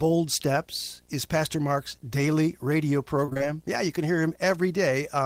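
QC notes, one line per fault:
throughout: video or display buzz, a 60 Hz buzz at the picture's field rate with hash above it, coupled in from a screen or cable, roughly 35 dB below the speech.
3.25–3.42 s: repeated packet loss (robotic sound) just after "daily radio". Short holes, the longest 23 ms, are patched by extending the last sound, covering about half the span and giving choppy speech.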